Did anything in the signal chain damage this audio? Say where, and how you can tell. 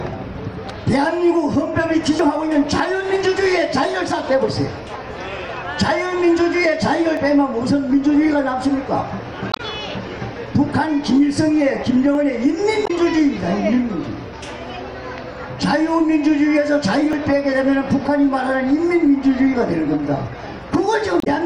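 Yes. At 2.19, 7.17, 12.15 and 17.13 s there are skips exactly 5 s apart, each a tiny slice of sound, around 20 ms, that vanishes with the edges butted together. This is audio missing between chunks, likely from a recorder or buffer stage dropping samples at each chunk handover. The waveform shows an abrupt discontinuity, and the spectrogram a thin vertical line, at each point.

Damaged data in a compressed stream appears at 9.51–9.60 s, 12.83–12.91 s and 21.18–21.27 s as brief chirps or blips. Corrupt bytes in the codec stream make the decoder misread frames until it resyncs. On a spectrogram each spot is a short block of garbled, smeared energy unrelated to the surrounding sound.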